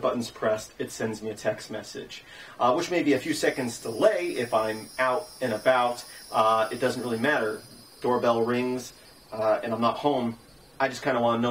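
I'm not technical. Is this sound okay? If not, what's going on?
Yes, it's fine: nothing in this sound catches the ear as a glitch, dropout or distortion, so there's nothing to worry about.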